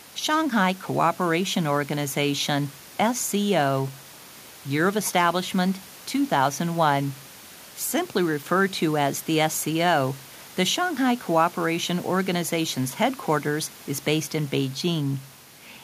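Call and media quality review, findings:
No faults found.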